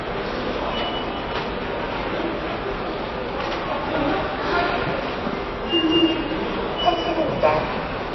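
From start to finish the sound is dull and watery, with nothing above about 5.8 kHz and a swirling, unstable texture in what remains. This is likely MP3 compression at a very low bitrate, around 23 kbps. Starved of bits, the encoder cuts off the treble at a fixed point and drops quieter frequency components, which then flicker in and out from one frame to the next and produce that plainly audible smeared, bubbling character.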